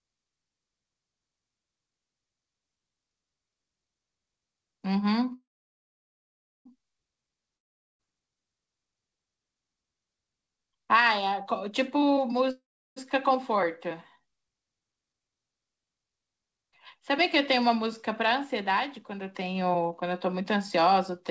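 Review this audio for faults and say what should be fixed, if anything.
Call audio freeze at 5.34–6.67 s and 12.51–12.98 s: the last sound smears into a fading buzz, then about 1.2 s and 0.33 s of silence. The speech resumes exactly where it stopped, so nothing is lost, only delayed. The likely cause is packets held up in transit while the jitter buffer ran empty.

Long network dropout at 7.57–8.01 s: a similar fade into about 0.41 s of silence. Unlike the freezes, the speech comes back further on, with roughly 0.42 s never heard.

Jitter buffer speed-up from 16.56 s to the end: after the backlog, the speech runs about 6% fast, hurried but at unchanged pitch, as short pitch-period slices totalling roughly 0.3 s are cut. Resampling would raise the pitch, but here it stays the same.

The G.722 call path carries nothing above 8 kHz.

To prevent these, stabilise the network route and give the jitter buffer enough headroom and loss concealment to absorb late and lost packets without stalling or rushing to catch up.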